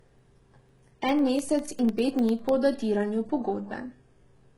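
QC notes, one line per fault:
Throughout: HE-AAC compression, likely the cause of a treble that is bright but not genuine. The lower band is coded heavily and the top is rebuilt by copying lower content upward, so nothing real sits above about 11.5 kHz and the upper harmonics do not line up with the body of the speech. The s sounds come out gritty and lispy, with a metallic sheen, which fits a very low bitrate around 12 kbps.
0.09 to 2.49 s: periodic USB or driver dropouts. Something on the bus or in the driver stalls the stream every 0.1 s, and each time a sliver of audio, a small fraction of a millisecond, is replaced with silence. Across roughly thirty gaps this sets up an even ticking at about ten per second, audible only while the speech is sounding and stopping after about 2.5 s.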